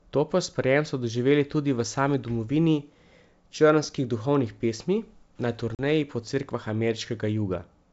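A speech clip on a G.722 wideband call at 64 kbit/s shows packet loss on an ADPCM call at 5.75 to 5.81 s. A few lost packets leave a hard-edged silent gap, a flat line in the waveform and a blank vertical strip on a spectrogram. The speech then resumes slightly distorted, because the decoder's predictor and step size have drifted from the sender's.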